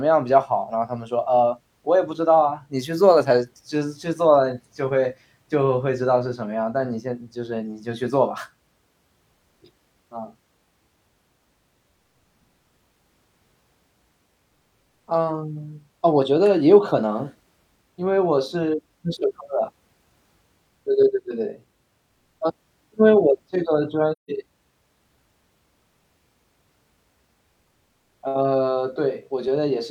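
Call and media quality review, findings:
Soft dropout in the speech at 24.12 to 24.30 s, roughly 170 ms of nothing. Probable component: AAC decoder, AAC frame loss with muting. Lost frames get zeroed spectrum, and the overlapping windows fade the sound out and back in at the edges. Gap length fits about four AAC frames gone.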